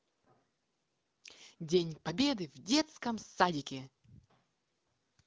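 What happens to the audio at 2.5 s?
Nothing goes wrong at 2.5 s: the speech there comes through intact, carried by the AMR wideband (HD Voice) codec at 12.65 kbit/s, a rate at which it stays clear.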